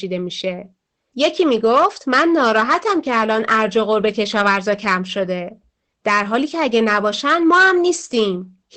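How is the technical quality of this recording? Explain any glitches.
The recording is clearly compressed, with one fault running the whole way through.

Opus voice compression affects the entire clip. The codec's SILK linear-prediction mode, at wideband, has discarded everything above 8.6 kHz and coded the voice excitation coarsely. That fits a bitrate around 12 kbps. The damage is plainly audible: the speech sounds muffled, hoarse and faintly robotic. On a spectrogram, energy stops at a flat ceiling near 8.6 kHz, and the harmonics below look smeared and grainy.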